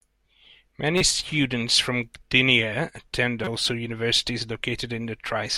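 At 0.98–1.01 s and 3.44–3.48 s, a corrupt frame decoded: flipped bits across a few frames misplace spectral energy, producing a loud chirp or burst of noise, then a quieter one.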